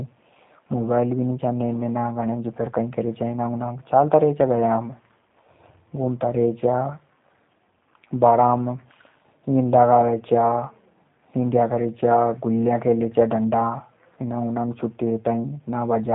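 Throughout the speech, G.729 codec damage is plainly audible. The coder rebuilds each 10 ms frame from a vocal tract filter, pitch predictor and sparse pulses, which fits an 8 kbit/s stream, and nothing above 4 kHz survives. Unlike a simple low-pass, it also sounds rough and synthetic.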